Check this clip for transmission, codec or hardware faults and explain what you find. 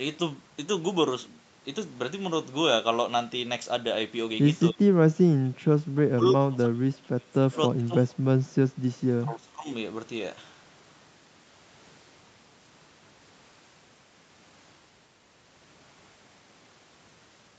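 Two faults appear in this speech, both between about 4.7 and 9.7 seconds, over a call path whose audio stops at 8 kHz.

Speech suppressed in double talk, at 4.72–4.88, 5.10–5.73, 5.95–7.52, 7.75–8.08 and 9.20–9.69 s: the talker's level sinks sharply, by roughly 20 to 30 dB at worst. The cause is likely an echo canceller mistaking overlapping far-end talk for echo and attenuating everything.

Echo leak, at 8.46–8.51 s: a faint, brief copy of the voice, about 35 dB below the speech, returns 308 ms late. It is likely residual loudspeaker pickup that the far side's echo canceller failed to remove and sent back down the line.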